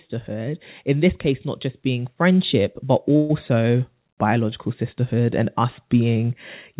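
From 0.25 s right to the end there's automatic gain rising: the gain control decided the input was too quiet and keeps turning it up, so speech and background swell together. At 3.16 to 3.31 s comes a call audio freeze, about 130 ms of buzzy, fading continuation, likely from packets stalling and emptying the jitter buffer, before the speech resumes with nothing lost.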